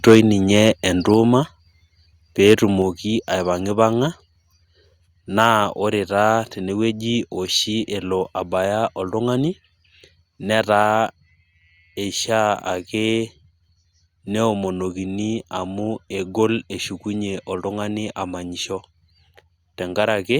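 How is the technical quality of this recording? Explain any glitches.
The recording has repeated level problems in the first 11 seconds, with the microphone overloading and then being turned down in steps.

Microphone overload at 0.07–0.2, 0.55–0.7, 2.47–2.54 and 5.39–5.48 s: input gain was likely set too high, so peaks exceeded the converter's limit by about 2 to 5 dB. Their tops were flattened, giving a harsh crackle, worst in the first burst.

Microphone volume stepped down at 0.15, 1.14, 2.82 and 10.83 s: software likely reacted to the loud input by cutting gain by about 1 to 4 dB, so speech and background drop abruptly.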